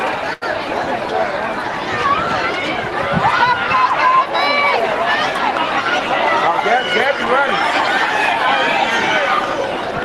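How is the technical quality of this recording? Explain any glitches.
One glitch stands out, heard over an Opus call path whose spectrum stops near 12 kHz. From 0.33 to 0.44 s there is a short stall from a late packet. The jitter buffer ran dry, so the last sound was stretched for 83 ms, giving a held moment with a slight buzz or dip. A spectrogram would show frozen horizontal streaks there, and the waveform would show one cycle repeating.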